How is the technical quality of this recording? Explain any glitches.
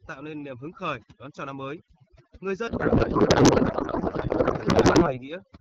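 The recording has two clear problems, one running through the whole clip and one taking over its second half.

Overdone noise removal, throughout: the background sits near silence with twinkling specks. Noise reduction set too strong is gating bands near its noise estimate, taking quieter speech detail with them.

Codec payload misread, from 2.67 to 5.28 s: the speech gives way to garbled noise and warble that barely tracks it. The receiver is misreading octet-aligned AMR frames as bandwidth-efficient, so every field lands in the wrong place.

Underneath, the AMR wideband (HD Voice) coding carries clear speech with only light codec damage, which fits a 12.65 kbit/s rate.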